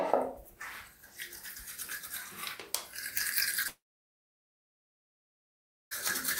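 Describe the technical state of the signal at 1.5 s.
At 1.5 s the signal is intact, with no dropout, clipping, distortion or other fault audible in the sound at that point.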